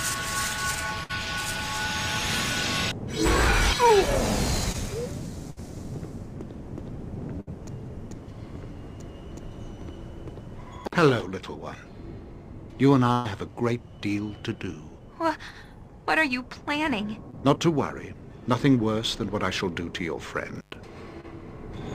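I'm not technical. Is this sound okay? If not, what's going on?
No, there are a few separate hiccups in it, all short.

The first is burst of packet loss, at 1.03 to 1.11 s, 5.50 to 5.58 s, 7.40 to 7.49 s and 13.13 to 13.27 s. Bits of the audio didn't arrive in time, so the receiving end kept the last sound going and faded it, which comes out as a held buzz or a fading hiss. Then the sound picks up again a little further along, skipping about 60 ms each time, or about 120 ms at 13.1 s.

Then there's short concealed packet loss, at 4.72 to 4.76 s, 17.31 to 17.35 s and 21.21 to 21.25 s. It's the same problem on a smaller scale. A sliver of about 20 ms went missing, and the receiver patched over it by stretching out whatever came just before, then blending back into the real audio. You hear a quick smear or wobble rather than a gap, and something very short can disappear entirely.

Last, there's intermittent contact, at 10.85 to 10.95 s and 20.56 to 20.76 s, where a loose plug or cable briefly lost its connection. 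The sound drops out or breaks up, with crackle where the connection cuts out and comes back. It was open for about 50 ms the first time and about 110 ms the second.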